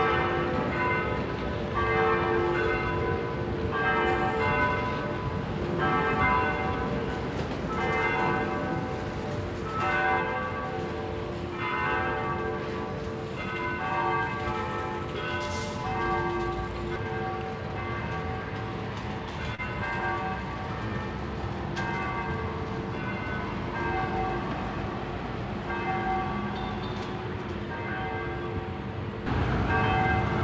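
Audio carried over a WebRTC call path using G.722, with nothing above 8 kHz, has short concealed packet loss at 19.55–19.61 s: about 30 ms never arrived, and the receiver extrapolated the preceding sound, leaving a brief smear.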